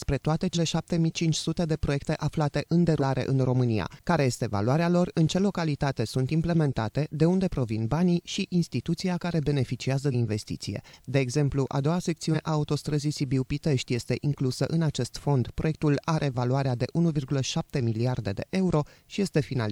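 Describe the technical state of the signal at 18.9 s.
At 18.9 s the signal is intact, with no dropout, distortion, clipping or other technical fault to be heard.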